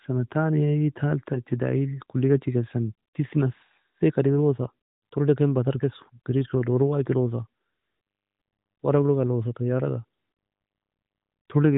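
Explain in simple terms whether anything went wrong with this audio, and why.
Nothing went wrong: the speech has come through the usual AMR narrowband mobile codec, which keeps it to the phone band with nothing above about 3.8 kHz, and no faults can be heard anywhere in the recording.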